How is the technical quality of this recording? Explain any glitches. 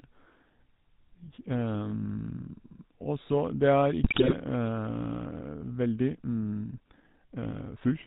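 Quality is poor, with coded telephone-band speech throughout plus two distinct glitches later in the clip.

The whole recording carries GSM full-rate codec damage, plainly audible. The codec rebuilds the voice from a vocal-tract filter driven by coarsely spaced pulses, and its data rate fits the 13 kbps full-rate mode. It keeps nothing above 4 kHz, so the speech sounds narrow, buzzy and gravelly. A spectrogram would show a hard ceiling at 4 kHz, with the harmonics below it looking grainy rather than cleanly striped.

From 4.02 to 4.35 s there are GSM bit errors, consistent with a badly corrupted radio link. Flipped bits reach the decoder and scramble the filter, pitch and gain values for individual frames. The voice breaks into squawks, pops and gargling for about a third of a second. On a waveform, the level jumps erratically frame by frame. A spectrogram shows blotchy, misplaced energy instead of orderly harmonics.

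From 5.73 s to the end, the speech suddenly runs about 1.44 times faster while the pitch stays the same. This is likely a time-stretched section, in which software shortened the audio by dropping small slices and splicing the remainder. The result sounds rushed and choppy. The waveform shows syllables packed tighter, with small discontinuities at the splice points. A spectrogram keeps the same harmonic spacing but squeezes the speech events closer together in time.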